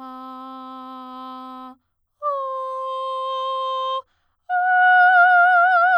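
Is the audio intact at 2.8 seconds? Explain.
Yes, the music plays through 2.8 s without any dropout, click, distortion or other fault at that moment.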